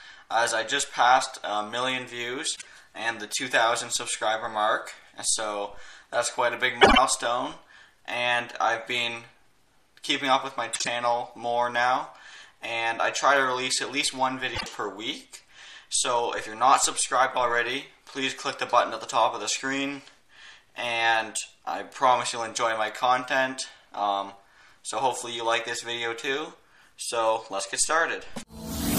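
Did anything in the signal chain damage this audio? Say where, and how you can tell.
Yes. Frames out of order: on the network or transport side, neighbouring runs of codec frames arrived swapped and were decoded as received. Short stretches at 2.56–2.67 s, 6.81–6.98 s, 10.73–10.87 s and 14.55–14.66 s play with their halves exchanged, giving a garbled flutter. Block lengths of about 26 ms and 52 ms fit one or two swapped frames per run. No time is lost.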